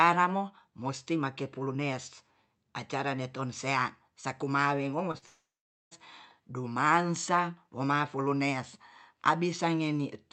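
At 5.11 to 5.16 s and again at 5.18 to 5.24 s, short concealed packet loss briefly smears the speech. About 20 ms and then 40 ms of audio failed to arrive in time, and the decoder bridged each gap by extending the preceding sound before blending back.

From 5.26 to 5.93 s the speech buzzes or hisses on, fades, and then goes silent for about 470 ms before resuming. Around 660 ms of audio is simply gone. A long network dropout is the likely cause, with concealment stretching the last sound until it gave out. The surrounding call audio is limited to about 8 kHz.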